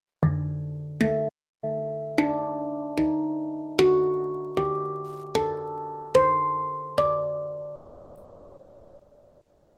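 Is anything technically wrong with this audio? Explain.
Yes, three separate faults can be heard.

From 1.28 to 1.64 s there is a playback stall. The audio halts for about 340 ms, leaving dead silence, and then carries on. The likely cause is the player running out of buffered data or its thread being held up. It differs from a network dropout because nothing is smeared: the sound simply pauses and resumes.

Between 3.82 and 5.82 s there is Wi-Fi interference, a steady ticking roughly ten times a second, about 40 dB below the wanted sound. The ticks come 102.4 ms apart, the standard beacon interval of a nearby Wi-Fi radio whose bursts are being rectified by the audio circuitry. A regular pulse train at that rate marks it as radio pickup rather than mains hum, which would be a continuous low tone instead of discrete clicks.

From 7.75 s to the end, the sound is dropped by the voice detector. 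The signal gives way to comfort noise for the last 2.03 s, and about 0.79 s of genuine sound is lost under it. The likely cause is the sender's voice activity detector treating quieter material as background and stopping transmission, which points to Opus DTX, with the receiver filling the gap with comfort noise. The comfort noise fill, rather than a plain silent gap, tells it apart from a playback stall.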